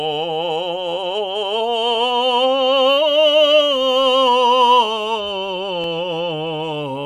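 At 5.84 s the music drops into a block of digital silence. The gap lasts about 1 ms. A run of samples was replaced by zeros, probably because the output buffer was not filled in time. The waveform jumps to zero and back with no fade. Each edge is a sharp step, and the two steps sit so close together that they merge. The gap is too short to hear as a hole. It comes through as a single tick.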